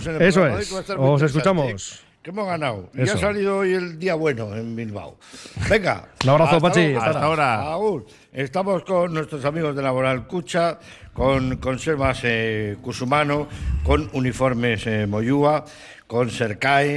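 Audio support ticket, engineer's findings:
No faults found in the audio.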